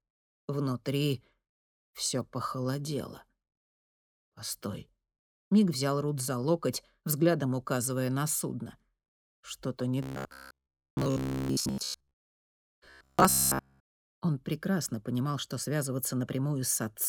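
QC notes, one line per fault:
10.03–13.86 s, robotic sound from repeated short buffers. The sound turns into a rigid, metallic buzz at about 67 Hz that only loosely tracks what came before. The likely cause is new audio arriving too slowly. A fragment of roughly 15 ms is replayed to fill each gap, while most of the real audio in this stretch is skipped. That fixed repeat imposes its own pitch, hence the steady buzz.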